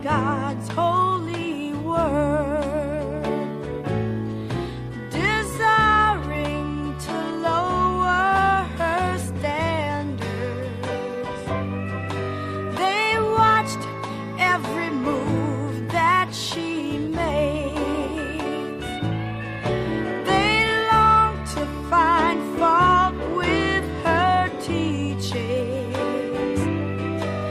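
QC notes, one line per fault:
Nothing to flag here; I listened all the way along and didn't catch a single problem worth a note.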